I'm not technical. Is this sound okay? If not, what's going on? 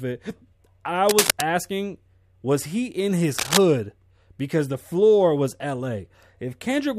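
No. At 1.07 to 1.44 s, and again at 3.38 to 3.58 s just after "was he in his", a rough scratching rustle sits over the speech. This is cable scratch noise, likely from a worn cable or connector being moved.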